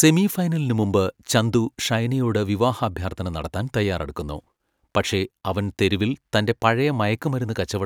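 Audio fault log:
0.83–6.85 s, periodic USB or driver dropouts: a tiny sliver of speech is skipped every 2.0 s as the driver stalls, each gap sounding as a tick.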